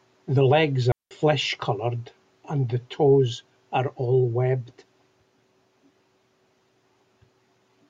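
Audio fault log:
0.92–1.11 s, digital wireless dropout: the speech cuts to near silence for about 190 ms, entering and leaving through very short fades, as the receiver mutes once the link has lost too much data. No noise burst surrounds the hole, unlike an analogue wireless dropout.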